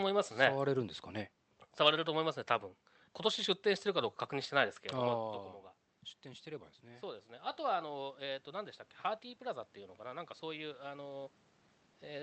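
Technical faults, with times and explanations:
6.23–8.81 s and 9.38–11.36 s, automatic gain rising: After the input level falls by about 13 dB, just after the talker moves back from the microphone around 5 s, the gain control lifts its gain by about 4 dB in each span. Voice and room noise swell together over a couple of seconds. On a waveform the envelope widens steadily. On a spectrogram the noise floor between phrases brightens along with the speech.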